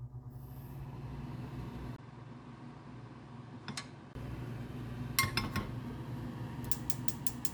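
An input switched to a poorer device from 1.96 s to 4.15 s, most likely a change to a different microphone or a headset's call profile. After a gap of about 20 ms at the switch, the sound turns duller, with nothing above 9.7 kHz, and falls by roughly 10 dB. A new background noise appears, roughly 40 dB below the signal. At 4.15 s the fuller, brighter tone returns.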